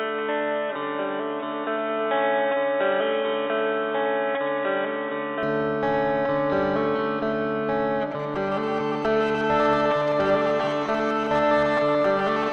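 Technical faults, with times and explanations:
0.00–5.43 s, input switched to a poorer device: The sound is dull and boxy, with nothing above 3.8 kHz. At 5.43 s it opens up with no gap and no clear level jump. This is likely a narrower-band input device with its own faint noise floor.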